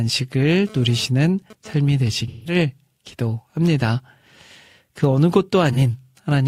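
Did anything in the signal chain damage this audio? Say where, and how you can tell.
Yes. GSM phone buzz gets into the analogue wiring from 0.67 to 1.73 s: a raspy 217 Hz buzz about 22 dB under the speech, from rectified data bursts.

The codec also shows AAC frame loss with concealment: smeared, phasey patches at 2.28 to 2.55 s (171 ms, about four frames) and 5.73 to 5.79 s (43 ms, one frame).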